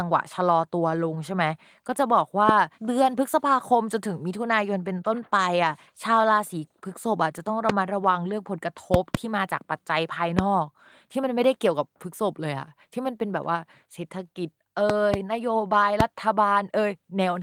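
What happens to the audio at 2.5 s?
A single sharp, loud pop cuts in from 2.49 to 2.51 s, around 20 dB above the speech, which carries on underneath. This loud pop is likely a brief voltage spike, such as a switch or static discharge, added to the signal.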